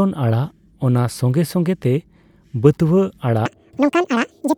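From 3.46 s to the end at 4.57 s, the speech turns sharply high and hurried, racing along at double speed with its pitch raised by roughly ten semitones. This section at the wrong speed is likely from playback or editing against a mismatched clock.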